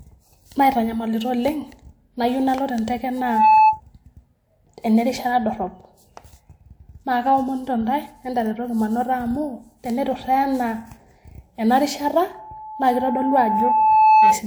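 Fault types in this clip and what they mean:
Loudspeaker feedback squeal: the microphone picks up the loudspeaker it feeds, and at 867 Hz the loop gain exceeds one, so that tone reinforces itself. It rises after "nayieu nalo tenteke" at 3.17 s, swelling within roughly a third of a second until 3.81 s, and after "ena rishat" at 12.32 s, building over about two seconds until 14.43 s, each time about 10 dB above the speech. A spectrogram shows one bright horizontal line at 867 Hz, and the waveform's envelope grows steadily.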